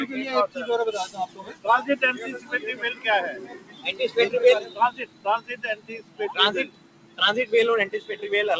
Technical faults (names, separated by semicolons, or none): noise suppressor applied to music or sounds; sound cut by the noise suppressor